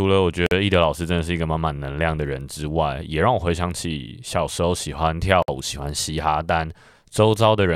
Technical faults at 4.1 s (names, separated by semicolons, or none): none